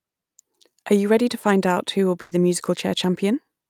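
Speech clip with a burst of packet loss at 2.21 to 2.33 s. About 100 ms of audio is missing. The last sound is stretched and fades before speech resumes further on.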